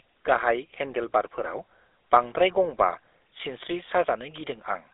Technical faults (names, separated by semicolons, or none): GSM full-rate codec